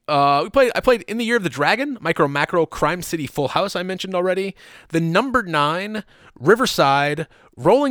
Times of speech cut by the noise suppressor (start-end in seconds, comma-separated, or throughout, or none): none